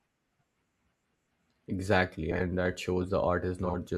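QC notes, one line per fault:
2.31–2.40 s and 3.65–3.75 s, frames out of order. Each span is about 0.1 s long. Two neighbouring 40 ms blocks of audio play swapped, later block first. That fits runs of four frames each exchanged before decoding. The speech turns into a short garbled flutter. Nothing is missing. The same sound is simply heard in the wrong order.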